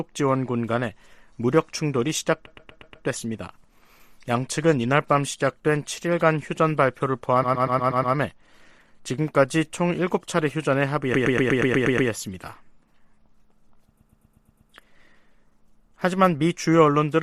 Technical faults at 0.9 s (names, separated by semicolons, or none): none